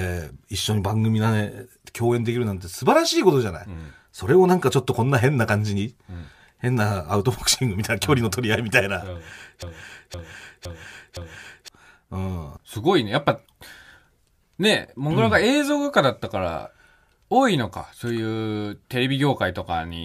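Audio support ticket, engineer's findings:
Speech stutters on a half-second fragment, 9.62 to 11.68 s: broken-record loop, one 0.51 s slice replayed four times back to back. Likely a stalled player or stream buffer resending its last fragment; the audio due in that span is lost.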